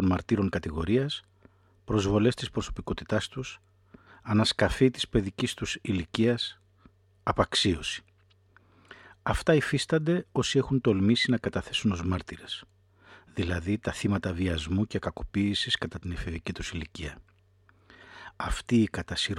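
No technical faults can be heard anywhere in this speech recording.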